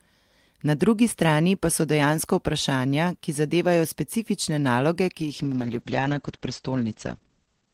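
Speech, with a call bitrate drop from 5.22 s to the end of the clip, about 2.5 s. The encoder's rate falls from 32 to 9 kbps, so the coding becomes coarse and the sound turns rough and watery. At that rate the audio band also narrows from 20 kHz to 8 kHz, which makes the speech muffled. The drop points to a falling bandwidth estimate on the call, and the bitrate never recovers before the clip ends.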